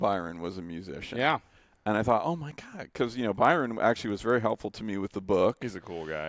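Speech, with a ticking that runs through the whole recording. The fault is a resampler restarted on every block. Each block appears to have been converted on its own, likely from 24 kHz down to 16 kHz. At every block edge, the converter lacked the true neighbouring samples, leaving a small error. The ticks come every 50 ms, a 20 Hz rate. They appear only while sound is present.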